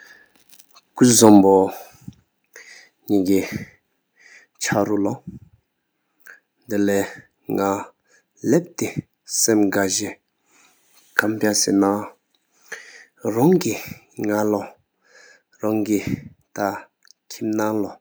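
From 1.23 to 1.38 s, the loudest part of the speech breaks up with a harsh, crackling edge. This is microphone overload. The input level likely ran about 3 dB past what the converter could represent, so the waveform peaks were flattened. Only a small fraction of samples were cut.

At 1.41 s, just after that distorted peak, the microphone volume steps down. Voice and background both drop by 6 dB at once. The likely cause is the call software reacting to the overload and lowering the device's input gain in a single step. The change is abrupt, not a gradual fade. Speech after this point sits noticeably quieter.

From 11.18 to 11.20 s, the microphone overload returns as a short, sharp crackle. This time the peak went about 7 dB over the limit. It is brief, but it is harsher than the first event.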